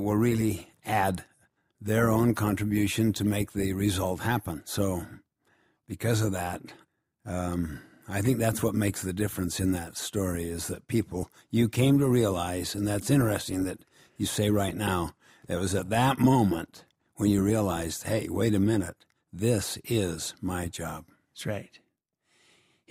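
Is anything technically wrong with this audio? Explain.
No, nothing technically wrong can be heard in this audio. No point in it stands out as a problem that would need fixing.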